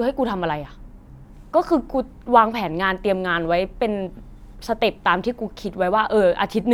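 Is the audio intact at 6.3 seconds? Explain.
Yes, the audio at 6.3 seconds is intact, with no dropout, click, distortion or other fault at that moment.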